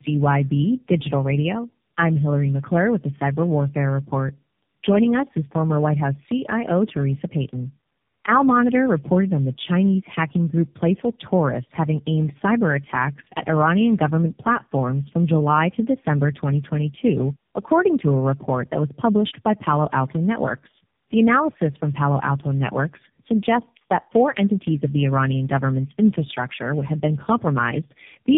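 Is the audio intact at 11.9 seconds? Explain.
No. Tandem speech coding affects the whole clip, including 11.9 s: three lossy speech codecs in sequence compound their errors, leaving rough, muffled, warbly speech with nothing above 3.7 kHz.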